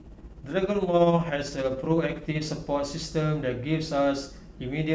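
From the start to 2.46 s the speech carries overlap-add ripple. Frames were windowed and rejoined with overlaps that don't sum to a steady gain, so the level pulses by about 6 dB, roughly fifteen times a second, giving a rough flutter. Unlike dropouts, the sound never actually cuts out.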